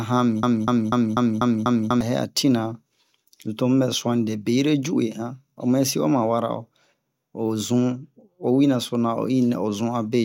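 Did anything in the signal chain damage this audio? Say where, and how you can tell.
Yes. A player or stream buffer likely stalled and kept re-sending its last chunk, causing a broken-record loop: from 0.43 to 2.01 s a 245 ms fragment of the speech repeats exactly six times back to back, and the audio that belonged there is lost.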